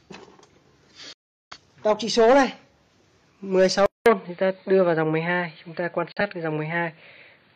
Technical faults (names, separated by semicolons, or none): digital broadcast dropout; input switched to a poorer device